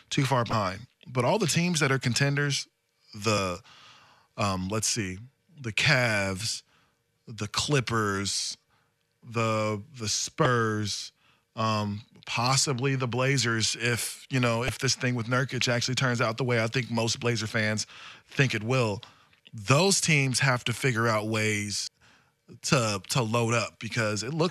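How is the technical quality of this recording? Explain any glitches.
The speech is interrupted by five short bursts of damaged data in a compressed stream, at 0.50–0.53 s (after "too far"), 3.35–3.38 s, 10.43–10.46 s, 14.66–14.69 s (between "you know" and "this thing with") and 21.84–21.88 s (after "have to figure out"). Corrupted bytes made the decoder misread the frames and resynchronise at the next header, producing roughly 30 ms chirps or blips.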